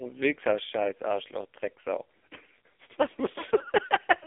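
The AMR narrowband mobile codec, at what sounds like a low mode near 5.9 kbps, runs throughout: speech confined to 300 Hz–3.5 kHz, nothing above 3.6 kHz, heavily buzzy and synthetic.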